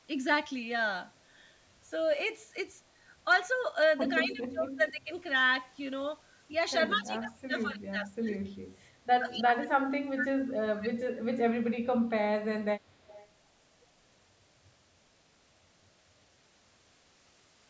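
From 4.24 to 5.11 s the talker's level sags by about 20 dB in patches, and from 6.95 to 8.75 s it drops by about 25 dB, thinning and breaking up. This is likely speech suppressed in double talk: with both sides speaking, the echo canceller could not separate the local talker from the loudspeaker echo and turned everything down.

At 9.31 to 9.35 s a faint copy of the voice, about 20 dB below it, arrives 202 ms late. This is likely an echo leak, where the far side's loudspeaker sound reached its microphone and the canceller failed to remove it.

From 9.31 to 11.04 s the suppression returns, this time likely from the same double-talk cause, with the talker pushed down by about 30 dB over roughly one and a half seconds.

From 12.8 to 13.28 s the 202 ms delayed echo likely leaks through again, now about 25 dB below the speech.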